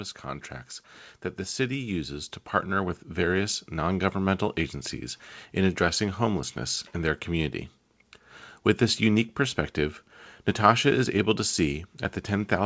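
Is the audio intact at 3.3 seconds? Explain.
No. At 3.3 seconds the speech and its background noise are swelling together, part of a gradual rise from 1.56 to 3.69 s. This is automatic gain rising: the gain control judged the input too quiet and raised its gain by about 6 dB.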